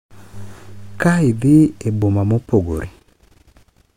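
Likely dropped buffers (overrun), with capture falling behind, cut out roughly 20 ms of speech at 1.02 and 2.02 s and about 40 ms at 2.84 s, each a skip forward.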